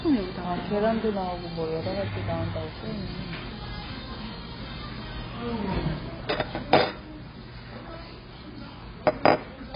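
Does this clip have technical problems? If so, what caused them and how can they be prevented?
Yes. Throughout, the sound is dull and smeared, with nothing above 5.2 kHz. This is likely heavy AAC compression. At a bitrate that seems to be about 16 kbps, the encoder discards the upper spectrum and coarsely quantises what remains. Encoding at a much higher bitrate from an uncompressed source would prevent it.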